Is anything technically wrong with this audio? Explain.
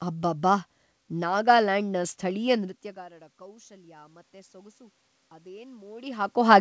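Yes. From 2.94 to 4.82 s the voice and room noise swell together by about 4 dB: automatic gain rising, as the AGC slowly compensates for the input dropping about 24 dB after the talker moved away around 2.5 s.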